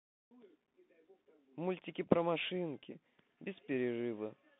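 Speech heard through a Bluetooth CVSD headset codec for its whole length: nothing passes above about 3.8 kHz, and the line band sits near 150 Hz to 3.6 kHz. The one-bit delta coding, which fits a 64 kbit/s stream, leaves plainly audible scratchy sibilants and a granular hiss beneath the speech.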